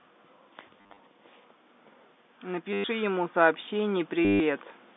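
A speech clip with two kinds of fault. The first is packet loss with the last packet repeated, heard three times. At 0.81 to 0.99 s, about 130 ms of audio is missing, scattered over 180 ms, and the longest gap is 40 ms. At 2.73 to 2.84 s, 110 ms is lost, and at 4.25 to 4.4 s, 150 ms is lost. Each gap is filled by replaying the previous chunk. The repeats do not line up with the voice's pitch cycle. Within a run the repeats merge into a robotic buzz. Its rate fits 10 ms packets, which puts the buzz near 100 Hz. The second fault is automatic gain rising, from 2.45 to 4.58 s. The gain control judges the input too quiet and slowly turns it up by about 5 dB. Voice and background swell together over those two seconds. The last stutter falls inside this swell. The sound sits in a narrow telephone band, roughly 200 Hz to 3.6 kHz.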